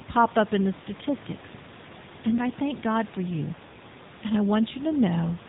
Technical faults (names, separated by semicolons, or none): AMR narrowband mobile codec